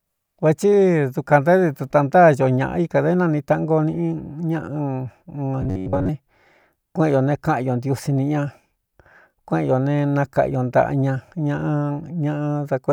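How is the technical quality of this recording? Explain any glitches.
One glitch stands out. Robotic sound from repeated short buffers appears from 5.62 to 6.10 s. The likely cause is audio arriving too seldom, so the playback fills each gap by looping the last fragment of roughly 10.7 ms while the real audio in between is dropped. For most of that half-second, repeats replace the speech, and their fixed period imposes a steady 93.8 Hz buzz. The result is a rigid, metallic drone that only loosely follows the speech.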